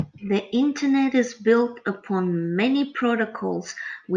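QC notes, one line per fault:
No audible faults found.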